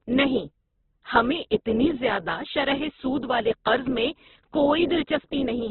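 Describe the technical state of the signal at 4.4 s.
At 4.4 s the speech sounds rough, grainy and cut off above 4.2 kHz, as throughout. This is likely Opus compression at a rate near 8 kbps: starved bands are refilled with folded or noise content, so it grates rather than swirling like MP3.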